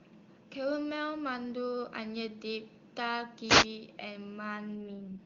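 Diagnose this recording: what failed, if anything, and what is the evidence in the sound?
Wireless microphone noise hit, 3.46 to 3.67 s. This happens at the analogue radio link between the microphone and receiver. For about a fifth of a second a burst of hiss and static rises over the speech, then clears. The FM carrier faded as reflected paths partly cancelled the direct signal, so receiver noise came up through the demodulated audio.

AMR rate drop, 4.77 s to the end of the clip. This fault sits in the network and codec stage. The bandwidth holds and there is no gap, but the speech turns rough, buzzy and more synthetic than the clear wideband coding before it. That change fits the AMR-WB link switching from 23.85 kbit/s down to the 6.6 kbit/s mode. A weakening radio channel prompted that switch so more bits would go to error protection.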